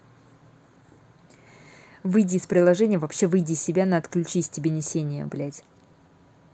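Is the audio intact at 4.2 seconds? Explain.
No, 4.2 seconds falls inside a stretch of repeated timing corrections running from 0.42 to 6.51 s, where small pieces of speech keep getting repeated, adding about 0.15 s in all. That's clock drift between sender and receiver: the sender's clock runs about 2% slow, so the receiver keeps padding to stay in step, which comes across, if at all, as slight hiccups or an unsteady tempo.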